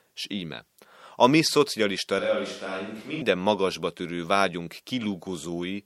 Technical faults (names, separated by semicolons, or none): switch to a distant microphone